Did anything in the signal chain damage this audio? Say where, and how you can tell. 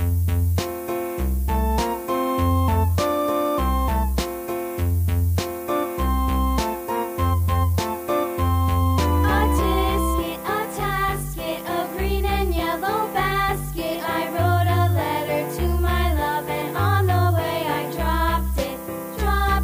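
Yes. Low bit depth with noise shaping runs through the whole clip, introduced at sample-format conversion. A steady, thin hiss sits about 15 dB below the signal and climbs sharply toward the top of the band. Rounding to just 6 bits, with the error pushed upward, produces exactly this.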